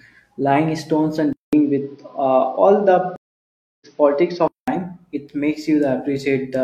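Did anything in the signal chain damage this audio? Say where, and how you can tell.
Yes. At the driver and device stage, the recording's input was likely switched to a poorer device from 1.33 s to 4.68 s. A 200 ms gap marks the switch. After it the speech loses everything above 6.2 kHz and turns duller and boxier, and a new noise floor appears, roughly 45 dB below the speech. The level barely shifts, so the telltale signs are the narrower band and the different background.

At the network stage there is a stream reconnect from 3.16 s to 3.87 s. The connection dropped and the player went silent for 650 ms, then reconnected with a fresh decoder. When the speech returns it has jumped ahead by about 0.7 s, which is typical of a live stream picking up at its current point rather than where it broke off, so that stretch of speech is simply missing.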